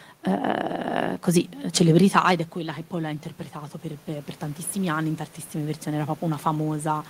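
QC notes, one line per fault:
2.53–7.10 s, automatic gain rising: after the talker moves back from the microphone around 2 s, the input falls by about 13 dB, and from just after "così celebrità ed è" the gain control lifts its gain gradually to the end of the clip. Unlike a talker simply coming closer again, the room noise swells together with the voice, because the whole signal is being amplified rather than the voice getting louder at the microphone.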